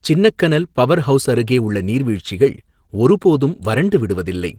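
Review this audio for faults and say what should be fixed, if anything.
Throughout the clip the speech sounds hoarse and faintly robotic, with plainly audible codec damage even though the band still reaches about 20.3 kHz. This is Opus voice compression in hybrid mode: the lower band is coded by linear prediction with a coarsely quantised excitation, which roughens the voice, while a thin transform layer handles the upper band. The bit budget is too small to code both well, which fits a bitrate of around 16 kbps.

To prevent it, encode at a higher Opus bitrate, or keep the original uncompressed source.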